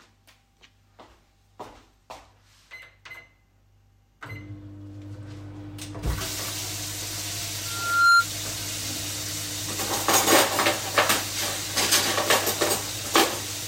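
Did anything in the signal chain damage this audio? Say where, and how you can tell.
Yes. There's a loudspeaker feedback squeal from 7.65 to 8.26 s, an acoustic loop between the playback speaker and the microphone rather than anything in the digital chain. You hear a single tone at 1.4 kHz swell up over roughly 0.4 s until it sits well above the sound, around 10 dB over it, and then it stops. Somewhere around 1.4 kHz the mic-to-speaker loop gain went past one, so that frequency kept feeding itself and growing.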